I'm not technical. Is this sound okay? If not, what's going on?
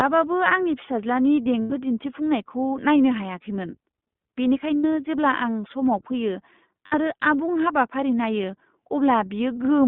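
No. All the way through, the speech sounds thin, muffled and a little rough or robotic, like a phone call. This is the iLBC codec, an internet-phone compression scheme that keeps only a narrow band of sound, roughly 150 Hz to 3.6 kHz, and squeezes it hard.

There are also three brief moments where the voice turns into a held, slightly buzzy hum. These are lost iLBC frames. The first comes at 1.60 to 1.72 s, between "आंनि फिसाज्लानि" and "दिन्थिफुंनायखौ नायनो हायाखैमोन", and lasts 100 ms. The second is at 4.77 to 4.85 s, just before "जेब्ला आं", lasting 80 ms. The third is at 6.87 to 6.95 s, lasting 60 ms. Pieces of the signal went missing in transit, so the decoder repeated the last bit of voice to fill each gap, and the speech recovers immediately afterwards.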